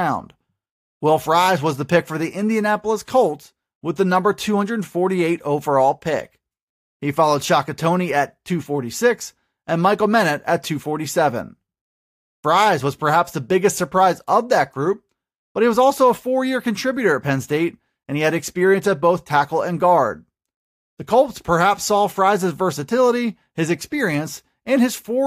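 No technical faults are audible.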